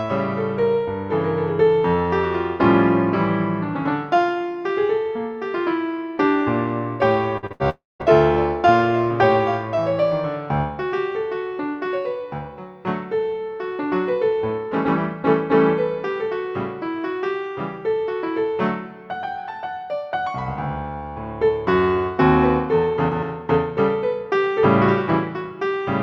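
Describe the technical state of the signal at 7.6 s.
At 7.6 s you're in the middle of a burst of packet loss, running from about 7.52 to 7.62 s. It follows straight on from a short concealed packet loss at 7.47 to 7.52 s, where about 40 ms never made it to the decoder in time. The receiver covered that hole by stretching the last sound for roughly 37 ms before blending back, so you get a quick smear or wobble rather than a clean gap.

The burst itself is about 80 ms of lost audio. The concealment keeps extending the last sound for around 75 ms and lets it fade, so it turns into a held buzz or a dying hiss. The audio then picks up further along, and whatever fell inside that window is simply gone.

Right after that, from about 7.70 to 8.02 s, there's a longer hole of about 300 ms, most likely a network dropout. The fill-in buzz or hiss carries on and fades, and by the end you're left with roughly 190 ms of silence before the audio comes back, with that stretch missing.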